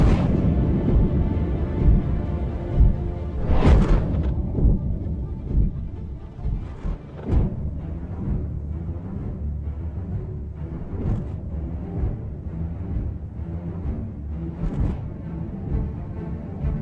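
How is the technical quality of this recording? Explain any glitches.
No glitches to report: no dropouts, clicks, distortion or timing faults are audible anywhere in the recording.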